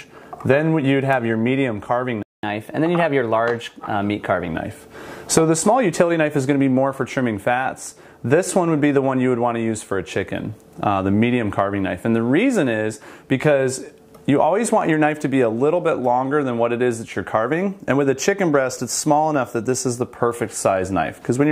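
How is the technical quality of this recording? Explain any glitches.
Two connected glitches occur early in the recording: a brief dropout followed by a stretch of faster, higher-pitched playback.

Playback stall, 2.23 to 2.43 s: the audio cuts to silence mid-flow for about 205 ms, then resumes. This gap most likely comes from the player running short of data or having its output thread held up, so it had nothing to send to the output until it recovered. The break is clearly audible and abrupt, not a fade.

Catch-up at higher speed, 2.43 to 4.48 s: right after the gap, the player works through its built-up backlog by resampling at 1.1 times normal speed to regain the lost time. Because resampling shifts speed and pitch together, the sound runs slightly fast and sits roughly one and a half semitones sharp for about two seconds. It then settles back to normal speed and pitch.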